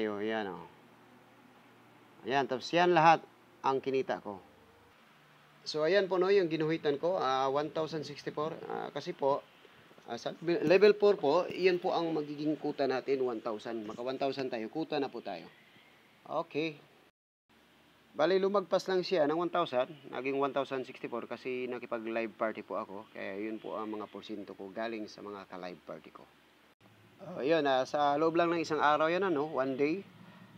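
No technical fault can be heard anywhere in the audio.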